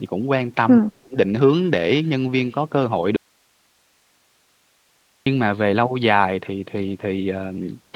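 From 0.8 to 1.17 s the speech dips sharply, by roughly 35 dB, likely speech suppressed in double talk as an echo canceller muted overlapping talk.

At 3.16 s the speech cuts abruptly to faint hiss around 40 dB down until 5.26 s, likely an audio dropout to a faint residue lasting 2.1 s.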